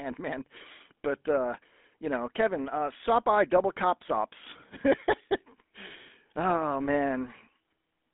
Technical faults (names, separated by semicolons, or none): GSM full-rate codec